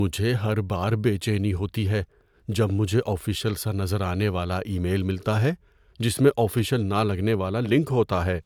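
Listening closely to the speech recording, nothing stood out as a technical problem at any point.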